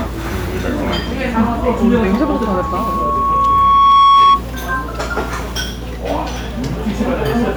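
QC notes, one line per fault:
1.60–4.43 s, loudspeaker feedback squeal: a 1.1 kHz tone swells over roughly two seconds to about 10 dB above the sound, a brightening horizontal line on the spectrogram.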